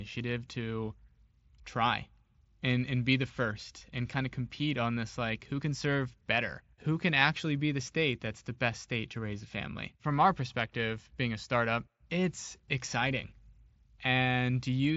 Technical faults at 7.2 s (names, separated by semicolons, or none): concealed Bluetooth headset packet loss